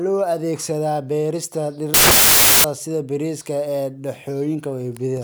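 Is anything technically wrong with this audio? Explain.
Yes. From 1.94 to 2.64 s, samples built from the wrong bytes turn the speech into loud, harsh broadband noise. The low bits end up dominating each value, so unlike added background hiss, the speech is buried in harsh broadband noise.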